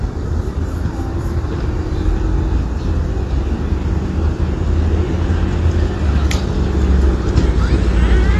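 From start to end, the sound is dull and smeared, with nothing above 12.1 kHz. Sustained parts warble and fizz, and the damage is plainly audible. This is likely AAC compression, AAC-LC at a low bitrate that fits about 32 kbps.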